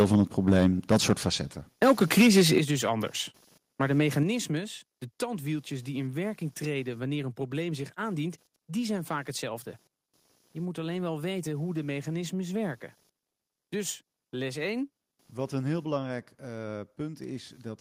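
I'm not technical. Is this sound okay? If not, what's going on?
No. Computer activity noise runs through the whole clip: a faint buzz pulsing about 300 times a second, from the computer's electrical activity leaking into the audio.

Microphone overload, from 0 to 1.13 s and 1.82 to 2.58 s: the loudest moments sound harsh and crackly, likely because the microphone was set too loud and the peaks got chopped off.

Microphone volume stepped down, at 0.02 s, 2.58 s (just before "dus anders") and 4.23 s: everything suddenly gets quieter, likely because the call software turned the microphone down after it sounded too loud.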